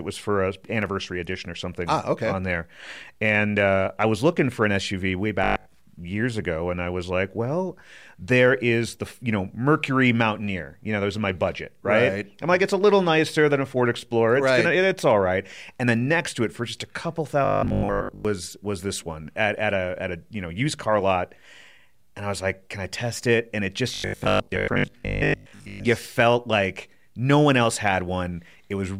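Between 0.65 and 0.86 s, after "was for a" and before "edition or something ah", there is a short burst of processor overload crackle. A handful of tiny buffers, each well under a millisecond, miss their deadline and drop to silence. The hard-edged gaps make gritty tearing with no steady pitch, which sets it apart from the buzz that follows.

Robotic sound from repeated short buffers appears at 5.44 to 5.76 s (just before "years ago and I"), at 17.45 to 18.25 s (between "for just a couple" and "was this one at") and at 23.94 to 25.86 s. The likely cause is a 20 ms slice being replayed in place of fresh audio, about half the time in the first stretch and most of the time in the later two. That repetition imposes a fixed 50 Hz buzz, a metallic drone that tracks the speech only loosely.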